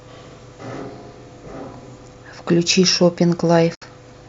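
At 3.75 s the speech sinks into silence and returns at 3.82 s, a gap of about 70 ms caused by AAC frame loss with muting. The decoder zeroed the missing frames, and their overlapping windows fade the sound out and back in. That gives a soft-edged hole, unlike a hard dropout. The gap's length fits about seven of the short frames used by low-delay AAC compression, likely AAC-ELD.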